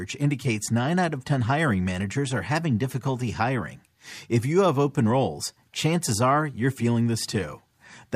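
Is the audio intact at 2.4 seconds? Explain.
Yes, the speech at 2.4 seconds plays through cleanly, with no dropout, click, distortion or other fault at that moment.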